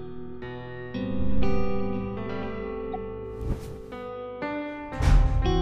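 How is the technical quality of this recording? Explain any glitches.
One glitch stands out. From 2.93 to 2.95 s there is a corrupt frame decoded: damaged bits in a couple of compressed frames were still played. This put a brief burst of energy, peaking around -25 dBFS, at the wrong frequencies. Unlike a click it has smeared content.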